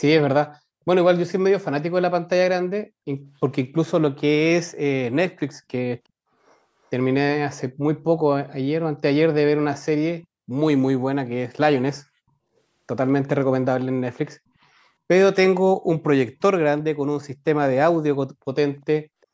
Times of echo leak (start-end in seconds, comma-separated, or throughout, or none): 13.23-13.28